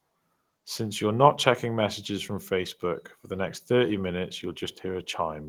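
No technical faults are audible.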